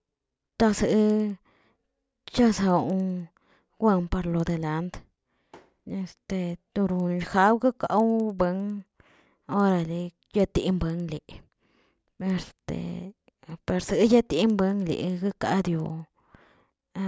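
Resampler restarted on every block, throughout the clip: the rate conversion, which points to a 48 kHz to 16 kHz step, was run afresh on each 100 ms block rather than as one continuous stream. At each block edge the converter lacked the true neighbouring samples, so every boundary carries a small error. The result is a steady train of ticks at 10 Hz riding on the speech, present whenever there is signal and vanishing in silent gaps.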